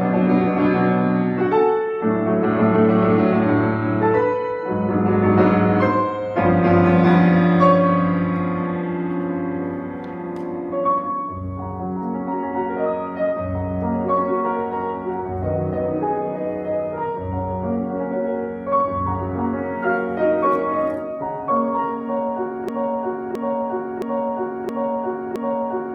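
Broken-record loop from 22.69 s to the end: a 0.67 s fragment repeats exactly, five times, likely because the stream stalled and kept resending its last piece.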